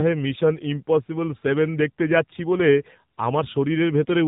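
Throughout, the speech shows AMR narrowband mobile codec damage: nothing above 4 kHz, plus a buzzy, synthetic vocal-tract quality that a plain telephone band-limit wouldn't add, fitting a low mode near 7.4 kbps.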